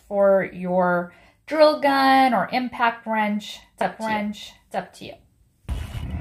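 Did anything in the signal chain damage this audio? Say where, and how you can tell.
Yes: a doubled audio track from 3.81 s to the end, a dry copy about a second behind and about 5 dB quieter, likely a second capture path.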